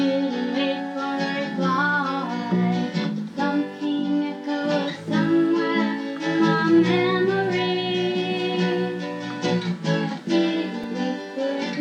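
Right near the end, at 10.84 s, there's a block of digital silence: the signal drops straight to silence for about 1.33 ms and then jumps back, with no fade on either side. That gap is so short it doesn't register as a hole. You just hear a tick or dip where the two hard edges land almost on top of each other. The length fits a 64-sample block of the output buffer coming up empty, which points to the program missing its deadline to fill it.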